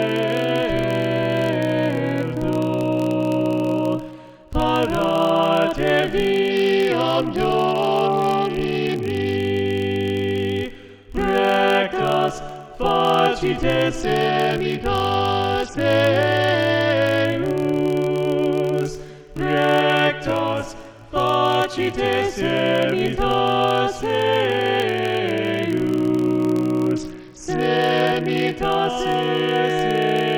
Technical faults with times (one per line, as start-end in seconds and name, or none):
0.00-30.38 filter restarted on every block
6.50-9.36 Bluetooth SBC bit pool drop
14.01-17.25 Bluetooth SBC bit pool drop
26.43-28.57 Bluetooth SBC bit pool drop